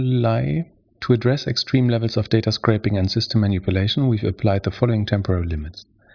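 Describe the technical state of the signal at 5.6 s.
At 5.6 s the speech signal is intact, with no audible technical fault at that moment.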